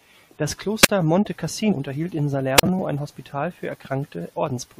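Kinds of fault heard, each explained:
Wireless microphone squelch dropout: A brief rise of hiss, then a hole of near silence lasting 43 ms at 0.82–0.89 s and 37 ms at 2.56–2.63 s, before the voice returns. The analogue FM radio signal faded until the receiver's squelch muted its output.
Damaged data in a compressed stream: A short, sharp blip from 1.71 to 1.73 s breaks into the speech. Corrupted bytes in the coded stream made the decoder misread the frames there and lose sync until it found the next valid frame header.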